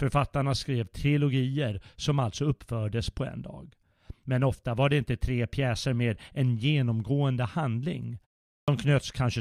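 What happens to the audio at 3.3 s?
At 3.3 s the speech plays through intact, with no fault at that moment.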